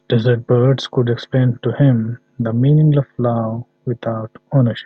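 No audible faults turn up anywhere in this recording.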